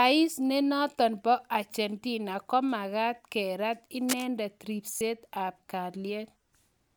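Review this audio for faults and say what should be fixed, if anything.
Lost LE Audio frames occur twice: at 1.72 to 1.74 s and at 4.97 to 5.01 s. The first gap is about 15 ms, which fits two 7.5 ms frames. The second is about 37.5 ms, which fits five. The LC3 decoder filled each gap by repeating the last spectrum with random signs. The speech turns into a brief noisy smear, and the longer gap starts to fade. Improve the Bluetooth link margin to prevent this.

Cable scratch noise appears from 4.08 to 4.25 s. Dense, uneven bursts of scratching sit over the speech for that moment. They are only a little quieter than the speech itself, so they are clearly audible. The likely cause is a worn cable, connector or control being moved, so its contact resistance jumps rapidly. Replace or clean the connector and secure the cable so it cannot move while recording.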